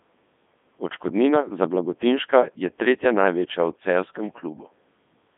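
From start to finish, the speech has passed through a Codec 2 vocoder. The waveform is not carried. Only pitch, voicing, energy and a rough spectral envelope survive, and the decoder rebuilds the voice from sine waves. The result is robotic and buzzy, with heavy damage. The sound fits the 3.2 kbit/s mode. The band runs from about 200 Hz to 3.6 kHz, and nothing remains above 3.8 kHz.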